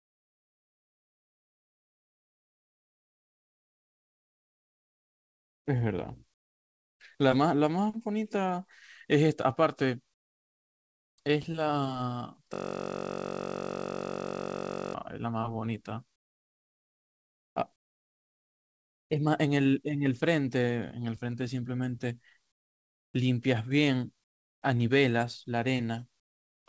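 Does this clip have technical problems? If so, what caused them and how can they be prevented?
Yes. Comfort noise in place of the background appears at 0 to 5.66 s, 6.34 to 7.0 s, 10.14 to 11.18 s, 16.16 to 17.56 s, 17.76 to 19.1 s, 22.52 to 23.14 s, 24.24 to 24.62 s and 26.2 to 26.66 s. In each pause, the real room sound gives way to a flat, featureless hiss about 22 to 28 dB quieter, likely because discontinuous transmission stopped the stream and the receiver synthesised filler. Unlike a dropout, the gap is never silent. It is filled with smooth noise that lacks the detail of the real background. Disabling DTX on the sending side, or raising the voice detector's sensitivity, keeps the genuine background flowing.

A system hang loop runs from 12.54 to 14.94 s. One 21.33 ms slice repeats exactly at 46.9 Hz, which fits a 1024-sample ring buffer cycling while the host froze. A jitter-buffer stretch would vary, but this sounds like a rigid, unchanging buzz. 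Keeping the audio thread at real-time priority, away from blocking work, prevents the stall.

Both faults sit within the G.722 call path's band, which stops at 8 kHz.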